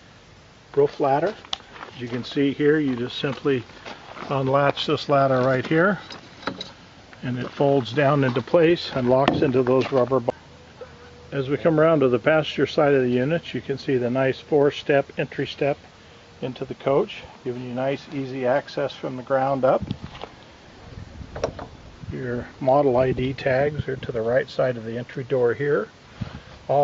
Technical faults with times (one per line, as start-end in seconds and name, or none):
none